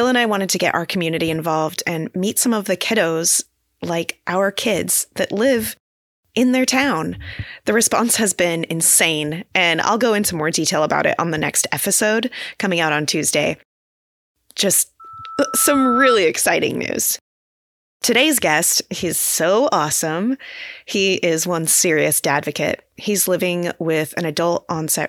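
At 15.00 s a loudspeaker feedback squeal starts: the microphone picks up its own loudspeaker, and at 1.3 kHz the loop gain passes one. A single steady tone swells over about a second to roughly 5 dB above the speech and stops at 16.20 s. A sustained tone that grows, not a brief click, marks it as feedback.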